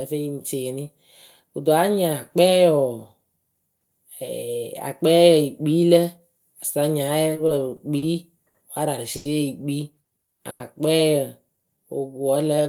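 From 7.35 to 8.04 s there's a patch of repeated stalls, a stutter. Packets were reaching the receiver late, so its jitter buffer kept draining. Four times in that stretch it had nothing to play and held the last sound going instead, about 90 ms of stretched audio in total, with the longest hold around 40 ms. Nothing actually drops out, but the sound hitches and drags over that bit.

Right after that come two short stalls from late packets, at 8.48 to 8.56 s and 9.16 to 9.27 s. Each time a single packet wasn't there when it was due, so the receiver stretched what it had, about 60 ms the first time and 90 ms the second, then carried on from the same spot. You hear a sound held a touch too long, with a faint buzz or dip, and the whole stream sits that much later afterward.

At 10.50 to 10.62 s there's a call audio freeze. For roughly 100 ms the last sound is carried on as a fading buzz or hiss without going fully silent, and then the audio resumes from where it stopped, so a gap has been inserted and nothing's lost. 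The likely cause is packets held up in transit long enough to empty the buffer.

Finally, from 11.57 to 12.63 s, there's a jitter buffer slow-down. The buffer was running low or had just raised its target delay and wanted more reserve, so it padded the audio by repeating single pitch periods and slivers of pause, adding about 104 ms. Playback runs at about 91% speed with the pitch unchanged, so sounds come out drawn out.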